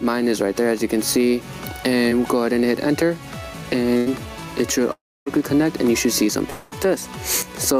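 The whole way through there's gain pumping, with a swing of around 10 dB. That's likely the gain set far too high with a fast limiter or compressor clamping down, so everything sounds squashed.

At 2.09 to 2.13 s there's a short concealed packet loss. About 20 ms never got to the decoder in time, and the receiver papered over it by carrying on the last sound for roughly 17 ms before blending back. It comes across as a quick smear or wobble.

At 3.97 to 4.08 s a burst of packet loss takes out about 100 ms. The gap gets filled with roughly 90 ms of the previous sound stretched out and turned down, heard as a brief held buzz or fading hiss. The audio then jumps ahead past the missing bit.

At 4.92 to 5.28 s you get what sounds like a long network dropout. Around 340 ms never arrived and, likely for that reason, the receiver continued the last sound as a fading buzz or hiss. That drops away into about 270 ms of near silence before the audio picks up further on.

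At 6.50 to 6.73 s there's another likely long network dropout, this time about 220 ms long. The concealment fills the whole gap with a fading continuation and never actually goes silent, then the audio resumes with that stretch gone.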